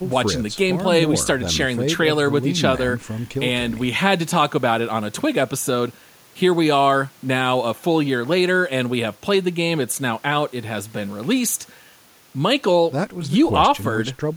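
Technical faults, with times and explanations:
No technical faults can be heard in the speech.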